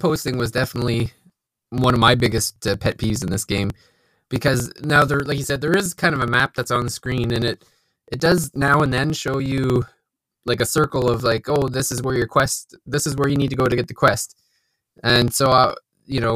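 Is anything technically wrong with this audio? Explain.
Yes. Periodic USB or driver dropouts run from 0.1 s to 16.3 s: every 0.06 s, something blocks the audio path and a few milliseconds of speech are skipped outright, so the joins click. The result is a steady, rapid ticking riding on the speech.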